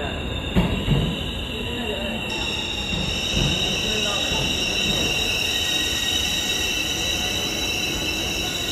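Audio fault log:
0.00–2.30 s: channel delay (comb filtering). One channel arrives a fraction of a millisecond late, roughly four samples, and the two are summed to mono. Shared content cancels at evenly spaced frequencies, starting around 5 kHz. The top end turns hollow.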